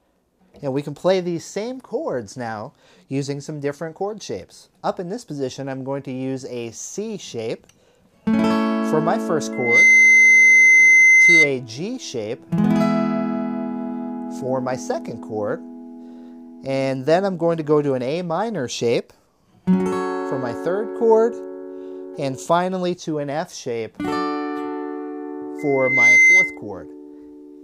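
At 9.52 s a loudspeaker feedback squeal kicks in: a mic is hearing its own speaker, and the loop runs away at about 2.1 kHz, swelling within a fraction of a second to roughly 10 dB over the sound until 11.53 s. It happens again from 25.58 to 26.59 s.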